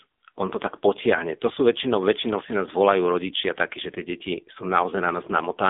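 From start to finish, the speech carries the sound of the AMR narrowband mobile codec. The band runs from about 250 Hz to 3.6 kHz, and nothing passes above 3.7 kHz. The top end is gone, so consonants lose their crispness. Lows are thin too. The damage is heavy. The voice turns buzzy and synthetic, which points to a low AMR-NB mode near 6.7 kbps. Each short frame is rebuilt from a vocal-tract model and a few pulses.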